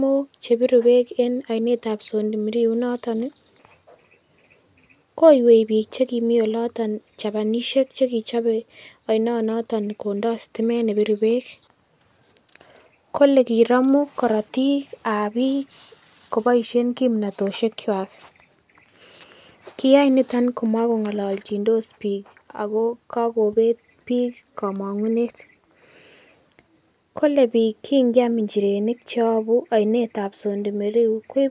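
Listening through the recording, nothing stood out as a technical problem at any point.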